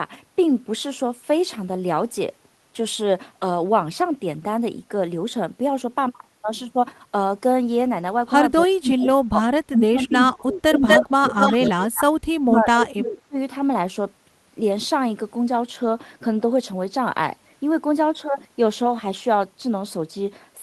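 A speech recording in which the talker's level sags between 8.67 and 13.37 s, by up to about 30 dB and for about three seconds in total. This is speech suppressed in double talk, likely an echo canceller that could not separate near-end speech from far-end echo and turned both down. In the same stretch an echo leak returns delayed copies of the speech at 9.0, 10.03 to 10.29, 10.75 to 10.99, 11.39 to 12.03 and 12.55 to 12.87 s. The copies lag by 301 ms in the first two and 242 ms after that. They start well below the speech and later reach roughly its level or slightly above, pointing to incomplete cancellation of loudspeaker pickup.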